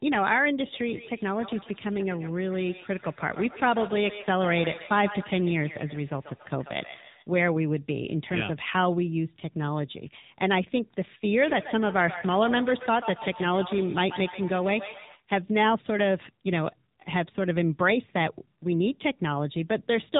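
Throughout, the speech went through the AMR narrowband mobile codec; its plainly buzzy, synthetic tone fits about 7.4 kbps, and nothing above 3.8 kHz survives.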